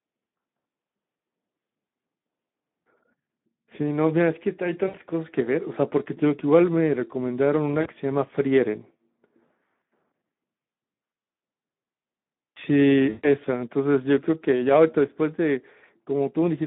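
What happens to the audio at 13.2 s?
Packets went missing from about 13.09 to 13.27 s, a gap of about 140 ms, which fits roughly seven 20 ms frames. This is VoIP packet loss concealed by the speech codec: the decoder kept extending its last pitch and filter while lowering the gain frame by frame. The sound is stretched into a buzzy tone or a coloured noise that fades. Because each rebuilt frame depends on the one before, the audio stays weak or distorted for a short time after packets resume.

Underneath the whole clip, including this moment, the Speex codec is working with too few bits. The damage suggests a rate around 11 kbps. With so little left for the excitation, the speech comes through hoarse and noisy. The band runs from about 150 Hz to 3.6 kHz, which gives it a narrow, telephone-like sound. That roughness and thinness are already present when the dropout begins.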